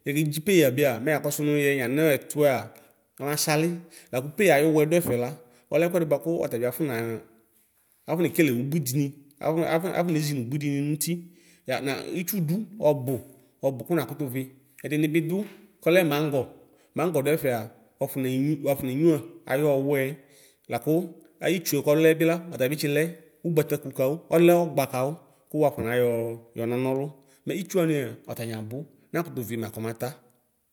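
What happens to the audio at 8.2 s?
Nothing goes wrong at 8.2 s: the speech there plays through cleanly, with no dropout, click, distortion or other audible fault.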